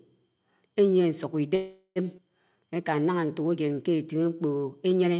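Speech heard through a narrowband call path, with nothing above 4 kHz, which fits G.711 mu-law at 64 kbps, carries three timing faults. From 1.55 to 1.99 s there is a call audio freeze: the last sound is stretched into a fading buzz for about 0.41 s, with almost no true silence. The likely cause is packets held up in transit while the jitter buffer ran dry. No speech is lost, but a gap is inserted. On a spectrogram it shows as smeared, flat harmonic bands that decay. At 2.17 to 2.21 s comes a skip ahead: roughly a fifth of a second of speech is dropped and the two sides are butted together with only a 10 ms join. The waveform shows an abrupt change in envelope, and the spectrogram shows a hard vertical seam where the formants jump. From 2.49 to 4.38 s a jitter buffer slow-down plays the speech at 90% speed while the pitch stays put. Single pitch periods and pause fragments are repeated to add about 0.2 s of reserve, so the sounds are drawn out. 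On a spectrogram, the harmonics keep the same spacing but the syllables look stretched, and the waveform shows repeated near-identical cycles.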